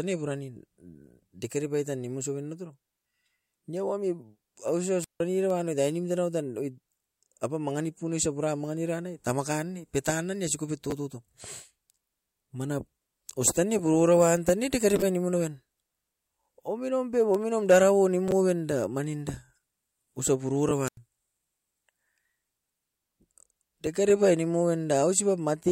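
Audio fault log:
5.01–5.21 s: wireless microphone squelch dropout. The FM radio link faded and the receiver's squelch closed, muting the output for about 159 ms. A brief swell of hiss comes first, then a hole of near silence, and the speech returns.
20.85–20.97 s: wireless microphone squelch dropout again, with a shorter mute of about 91 ms. The same rise of static, gap, and recovery can be heard.
10.90–10.92 s: chunks out of order. A 10 ms block of audio was delivered one chunk late and played after the block that should have followed it. Nothing is missing, but three hard joins produce a tiny jumbled flicker.
18.28–18.32 s: chunks out of order. A 10 ms chunk arrives three chunks late, which gives a slightly longer scrambled moment.
20.69–20.71 s: chunks out of order. A single 10 ms chunk is swapped one place late, heard as a short stutter just before the second dropout.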